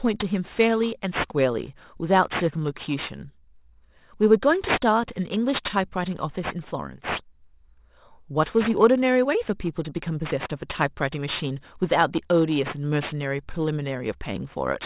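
Aliasing runs through the whole speech clip. The band stops hard at 4 kHz, which fits a conversion down to an 8 kHz sample rate with no low-pass filter first. Energy that sat above 4 kHz has folded back below it at unrelated frequencies, only moderately below the true signal. Sibilants come out gritty and metallic rather than crisp, with a harsh edge that crowds against the top of the band.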